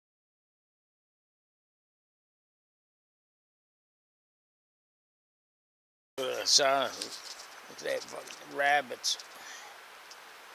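No technical faults are audible.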